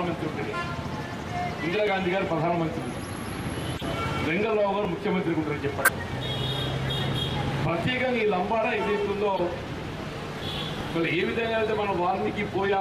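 At 1.87 s the sound skips forward by roughly 20 ms with no gap of silence, and identical skips recur at 4.85 and 7.83 s, about 3 s apart. This is audio missing between chunks, likely from a recorder or processor dropping a short slice each time it closes one 3 s block and opens the next.

At 2.52 s, 3.77 to 3.84 s, 5.85 to 5.90 s and 9.36 to 9.41 s there are brief chirps or noise blips, peaking near -30, -20, -10 and -15 dBFS respectively. These are corrupt frames decoded: damaged compressed data played anyway, spraying energy into wrong frequencies.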